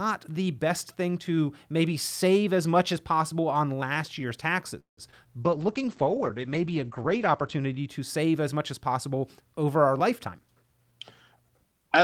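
Just after "possible on last year's", at 4.79 s, the speech stops dead: a brief continuation of the last sound fades into about 140 ms of silence, and the talk resumes at 4.99 s exactly where it left off, with nothing lost. That is a call audio freeze, likely caused by packets stalling in transit until the jitter buffer emptied. The receiver bridged the wait with about 180 ms of invented sound, so the rest of the call now runs that much later.

Straight after that come two instances of short concealed packet loss, at 5.11 to 5.14 s and again at 5.24 to 5.27 s. Each sounds like a quick smear or wobble in the speech. About 20 ms of real audio failed to reach the decoder in time on each occasion. The receiver papered over the hole by extending the preceding sound and then crossfading back into the genuine signal.

From 5.45 s the speech turns coarse and muffled, and it stays that way until 7.94 s, just before "save as much as". 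This is a call bitrate drop. The bandwidth estimate fell and the encoder was cut from 48 kbps to 11 kbps, where it sat for about two seconds. At that rate Opus quantizes roughly and narrows the audio band from 20 kHz to 8 kHz, so the upper frequencies vanish and the speech loses its crispness.

After "as possible over our", from 10.25 to 11.73 s, the speech sounds hurried, running about 13% fast with no change in pitch. This is a jitter buffer speed-up. The buffer was holding more audio than its target, so the receiver trimmed delay by cutting out short pitch-period slices again and again. Together those cuts remove about a fifth of a second.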